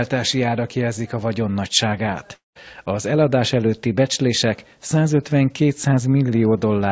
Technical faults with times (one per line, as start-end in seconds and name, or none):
2.34-2.57 long network dropout